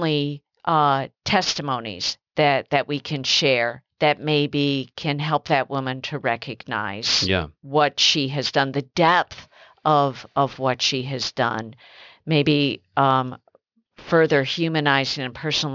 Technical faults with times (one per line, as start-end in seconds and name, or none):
0.00-15.75 aliasing